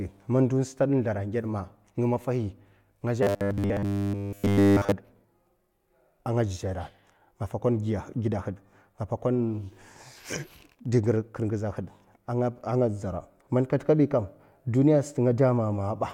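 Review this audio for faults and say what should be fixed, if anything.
From 3.23 to 4.92 s the speech turns into a rigid, metallic buzz at 100 Hz. This is robotic sound from repeated short buffers, likely 10 ms chunks repeated throughout. Keep incoming audio ahead of playback so the buffer never runs dry.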